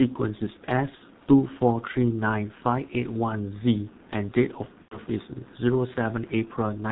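Throughout, the speech carries heavy G.723.1 codec damage at about 6.3 kbit/s. Nothing above 4 kHz survives, so it sounds muffled and hoarse, with smeared consonants.

From 0.95 to 1.02 s, and again from 4.82 to 4.98 s, VoIP packet loss is concealed by the speech codec. The decoder stretches the last sound into a fading buzzy tone or coloured noise. The gaps fit about 60 ms and 90 ms of lost audio.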